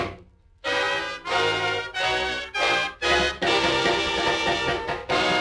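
No technical faults can be heard at any point in the audio, so there is nothing to describe in time order.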